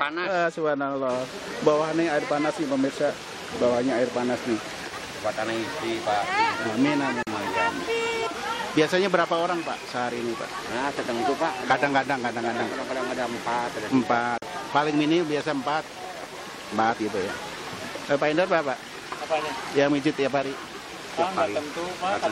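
Gaps at a join of encoded pieces occur at 7.23 s and 14.38 s: the continuous sound drops into silence for about 43 ms each time, with smeared edges, then resumes where it stopped, because separately encoded pieces were joined with their encoder delay and end padding left in.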